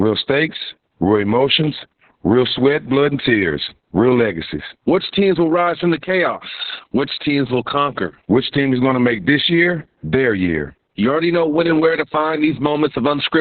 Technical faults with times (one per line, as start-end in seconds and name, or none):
0.00-13.40 Opus voice compression